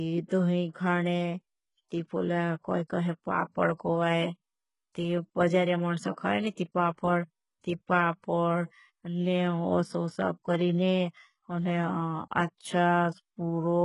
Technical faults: HE-AAC compression

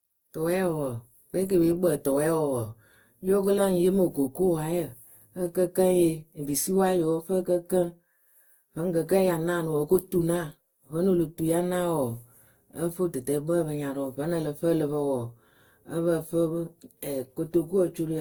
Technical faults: generation loss

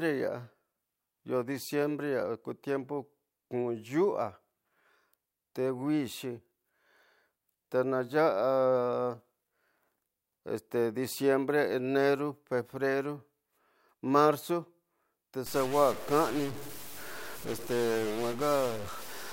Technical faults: stuck bit

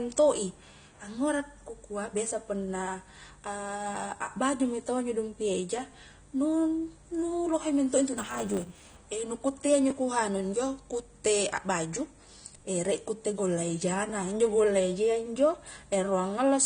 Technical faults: AAC compression; block size mismatch (truncated)

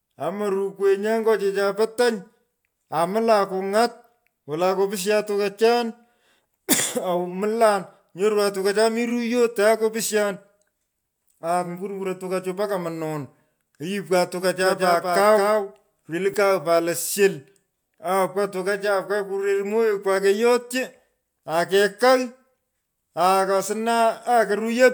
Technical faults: doubled audio track

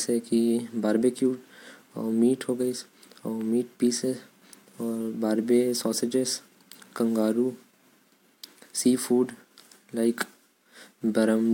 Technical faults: none

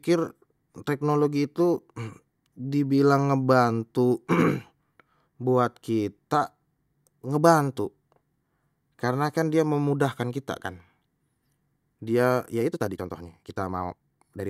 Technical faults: time-stretched section

